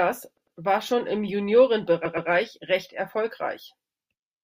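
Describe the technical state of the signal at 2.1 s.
Repeated frames, 2.05 to 2.29 s: a 120 ms block of compressed audio is played two extra times, giving an audible stutter and adding 240 ms.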